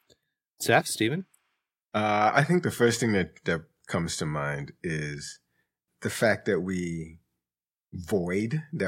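No technical faults can be heard anywhere in this speech recording.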